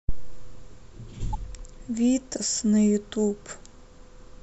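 A short speech recording with two spots of corrupt frame decoded. There's a quick blip at 1.33 s, then a longer chirpy burst from 2.36 to 2.43 s, which sounds like a few damaged frames in a row. In both cases flipped bits got through and the decoder played the frames anyway, so misread gains and codes put energy at the wrong frequencies, peaking somewhere around -30 dBFS.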